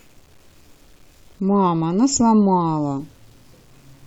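Low bit depth without dither runs throughout this speech clip: quiet passages and word tails turn gritty, with a grainy distortion roughly 40 dB below the signal. It points to audio likely truncated to about 8 bits without dither, so the error tracks the signal.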